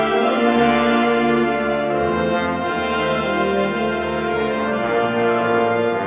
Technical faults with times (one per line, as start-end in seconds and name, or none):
none